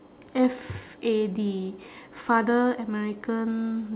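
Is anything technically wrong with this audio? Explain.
No, nothing is technically wrong with this speech recording; it carries the ordinary traits of a narrowband call path, with no content above 4 kHz, which fits a telephone codec such as G.711 A-law.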